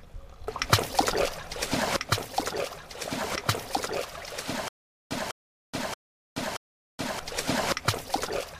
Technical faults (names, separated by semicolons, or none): stutter with silent gaps